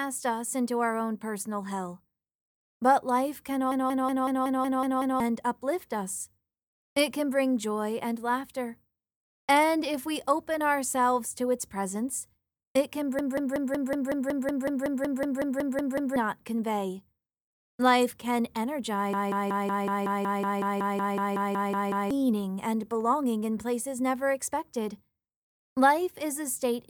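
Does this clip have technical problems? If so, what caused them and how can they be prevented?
Yes. A system hang loop occurs at 3.72–5.20 s, 13.19–16.16 s and 19.13–22.11 s. Each time, one 186 ms slice repeats at 5.38 Hz, giving a machine-gun stutter. This fits an 8192-sample buffer replayed while the system froze. Prevent it by fixing the driver or system stalls.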